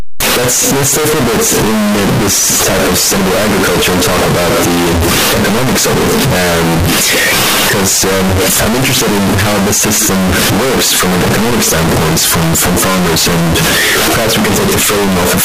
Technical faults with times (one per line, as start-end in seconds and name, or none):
0.00-15.44 signed and unsigned mixed up